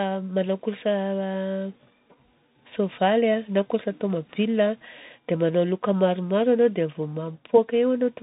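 From start to finish the speech comes through a Bluetooth CVSD headset codec, and the damage is plainly audible. Nothing gets past about 3.8 kHz, which fits a 64 kbps CVSD link. Its one-bit up/down steps can't keep up with loud high sounds, so s sounds turn scratchy, and a granular hiss also sits underneath.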